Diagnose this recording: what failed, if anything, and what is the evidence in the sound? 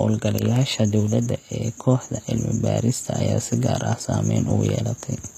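The failure is at the codec stage, and the likely cause is HE-AAC compression. The damage is plainly audible across the whole speech clip. Nothing reaches above about 14.9 kHz. The treble above the crossover is not the original. It is rebuilt from copied lower bands and shaped only by a coarse envelope. Harmonics fail to line up, so s sounds turn gritty and lispy. The coding depth fits a bitrate near 24 kbps.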